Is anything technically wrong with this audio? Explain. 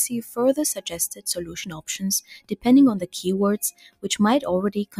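Yes. A noise suppressor built for speech has been applied to music or sounds, and it stays active across the whole clip. It treats steady tones, ambience and reverb as noise. Sudden onsets pass, but held parts and tails get pulled down. The level swings by about 15 dB as the suppressor reacts. This makes the sound pump and flutter, and it thins out between attacks.

There are also four spots where the noise suppressor cut the sound itself. They fall at 0.75 to 0.92 s, 1.14 to 1.88 s, 2.40 to 2.66 s and 3.72 to 4.06 s. The drops reach about 17, 18, 19 and 18 dB. In each one, sustained or decaying material sinks sharply or has its tail cut short. The longest, near 1.1 to 1.9 s, sounds like the sound briefly ducking away.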